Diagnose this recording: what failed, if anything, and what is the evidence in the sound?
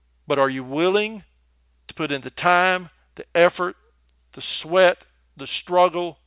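Nothing in the signal chain failed: the speech is continuous, with no dropouts, level jumps, distortion or timing disturbances anywhere in the recording.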